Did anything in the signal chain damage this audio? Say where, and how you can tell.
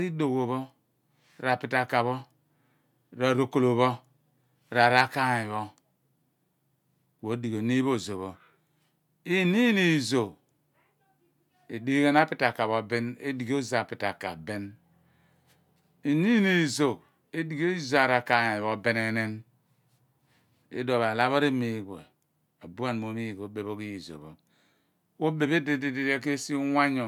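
No, nothing in the signal chain damaged this speech.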